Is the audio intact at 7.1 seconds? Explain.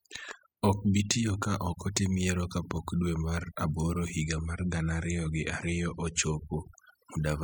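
No. The speech at 7.1 seconds sits over near-silent, twinkling background, from overdone noise removal throughout, which gates out bands near the noise estimate.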